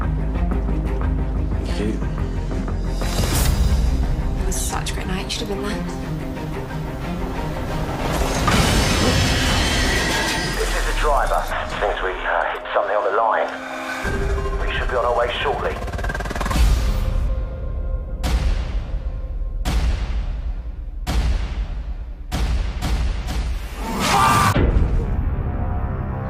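Nothing in the audio stood out as a technical problem on listening.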